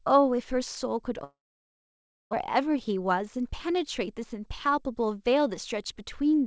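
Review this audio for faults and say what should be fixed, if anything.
From 1.24 to 2.35 s the speech breaks off into a brief fading buzz, then close to a second of silence, and resumes with a piece of speech missing. The likely cause is a long network dropout, where the receiver briefly stretched the last sound before giving up. Preventing it means improving network reliability or adding redundancy and forward error correction so that lost packets can be recovered.

From 2.43 to 3.21 s the speech sounds hurried, running at about 108% speed with its pitch unchanged. This is a jitter buffer speed-up: after packets piled up, the receiver removed small pitch-period slices, around 70 ms in all, to reduce the added delay. Preventing it means smoothing packet delivery or letting the buffer drain more gradually so that the shortening is spread out.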